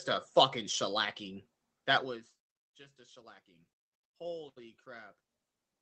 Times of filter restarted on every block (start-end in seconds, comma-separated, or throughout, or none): none